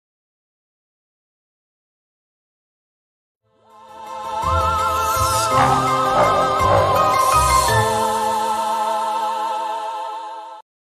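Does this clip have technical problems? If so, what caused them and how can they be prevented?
No, no faults are audible.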